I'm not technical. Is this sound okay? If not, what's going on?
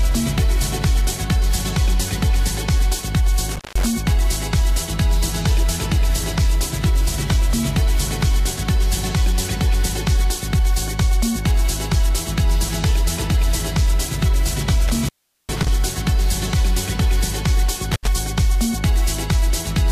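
No. There are three short breaks caused by an intermittent contact, meaning a loose cable or plug that briefly lost its connection. The first is around 3.47 to 3.86 s, with the line open for about 0.17 s. The second and longest is at 14.88 to 15.69 s, open for about 0.4 s. The last is at 17.91 to 18.07 s, open for about 0.07 s. At each one the audio drops out or breaks up, with crackle as the connection opens and closes.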